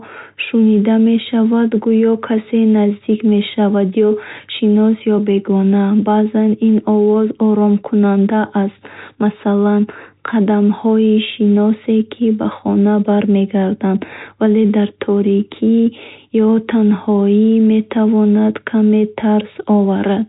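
Nothing goes wrong anywhere in this speech, which simply carries the usual G.711 telephone sound with nothing above 3.8 kHz, just as a phone line would.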